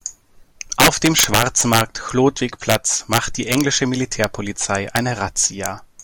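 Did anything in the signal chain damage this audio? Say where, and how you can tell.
Yes. Integer overflow at a fixed-point gain or sample-format conversion stage: speech peaks driven up to about 6 dB past full scale wrap to the opposite sign. Violent cracks land at 0.80–1.81 s, 2.70–2.75 s, 3.13–3.61 s, 4.24 s, 4.96–4.99 s and 5.66 s. Clipping would merely flatten peaks; these snap across the full range.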